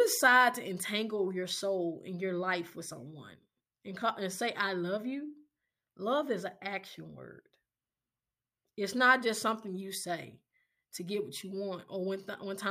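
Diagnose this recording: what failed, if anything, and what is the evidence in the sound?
No fault found in this recording.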